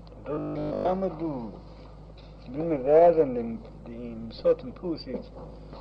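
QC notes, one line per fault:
0.35–0.85 s, robotic sound from repeated short buffers: for half a second the sound collapses into a rigid, metallic buzz pitched at 50 Hz, with essentially none of the real audio getting through. The likely cause is new audio arriving too seldom, so playback keeps looping the last slice it holds; a 50 Hz buzz fits a 20 ms slice repeated back to back, which stamps that fixed pitch onto the sound until fresh data resumes.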